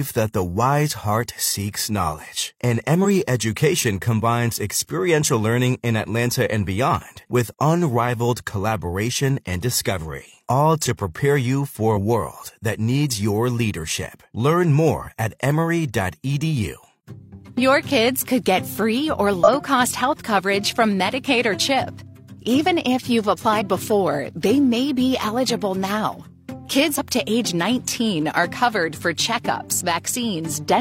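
The audio has damaged data in a compressed stream at five points: 3.01, 11.93, 19.44, 23.57 and 26.94 s. Each disturbance lasts about 50 ms. Corrupted frames break decoding there, and the decoder resynchronises afterwards.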